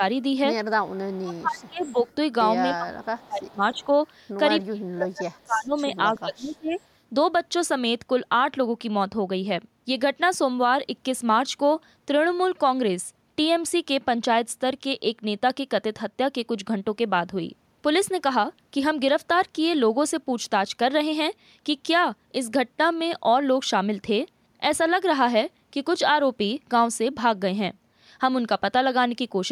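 At 0.85 to 0.92 s a faint echo leak appears: a copy of the far side's speech returning about 0.3 s late and roughly 30 dB below the main speech. The likely cause is a loudspeaker-side echo canceller letting residue through. On a spectrogram it shows as weak, smeared harmonic traces that repeat earlier patterns offset by 299 ms.

Straight after, from 0.95 to 2.05 s, comes speech suppressed in double talk. With both sides talking, the canceller likely could not tell its own talker from the echo and attenuated both. The voice dips by up to about 30 dB in pieces totalling around 0.7 s. On the waveform the envelope collapses in notches, and on the spectrogram the upper bands thin or vanish.

Echo returns at 1.59 to 2.15 s. Further suppression follows at 2.74 to 3.87 s, around a second of it. Brief echo scraps occur at 3.47 to 3.54 s and at 3.74 to 3.86 s, the second about 35 dB down. The last suppression runs from 4.64 to 5.74 s, the deepest at about 35 dB, and from 6.12 to 6.8 s at about 25 dB.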